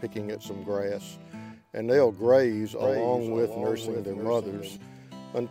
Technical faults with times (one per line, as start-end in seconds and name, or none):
2.82-4.76 doubled audio track